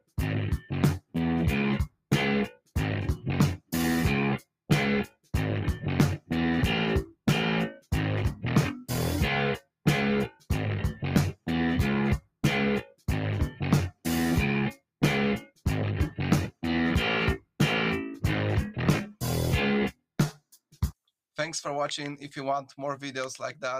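All the way through, a speech-style noise suppressor was left on and treats sustained material as noise, so the level pumps by around 5 dB. Within that, the sound gets cut by the noise suppressor from 0.0 to 8.43 s, 9.6 to 17.6 s and 19.09 to 21.09 s, dropping by up to about 21 dB. It adds up to roughly a second and a half in each of the first two stretches and half a second in the last. Held tones and tails sink while attacks poke through.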